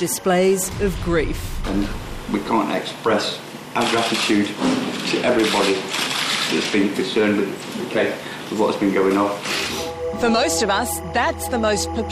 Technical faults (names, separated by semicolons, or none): timecode bleed